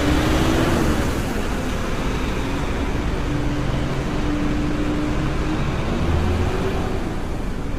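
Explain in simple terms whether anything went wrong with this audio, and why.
Yes, something went wrong, and it lasts the whole clip. The sound is rough and grainy, with a hiss filling the gaps between its tones. The highest sounds are missing above about 15.8 kHz. The damage is heavy. This is likely low-delay AAC compression, the kind used in video calls. It works in very short slices of sound to avoid lag. Those short slices capture tones poorly. With too little data, the fine detail turns to noise.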